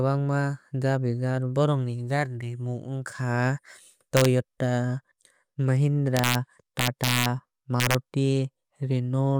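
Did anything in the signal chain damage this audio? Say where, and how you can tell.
Yes. The speech shows integer overflow at 4.17–4.25 s, 6.17–6.35 s, 6.79–7.26 s and 7.80–7.95 s, where loud passages were pushed about 1 to 3 dB past full scale. The damage happened in fixed-point gain or sample-format conversion. Samples that exceeded the maximum wrapped to the opposite extreme instead of being limited. On a waveform, peaks snap from one rail straight to the other. A spectrogram shows bright broadband vertical streaks, heard as harsh cracks much sharper than clipping.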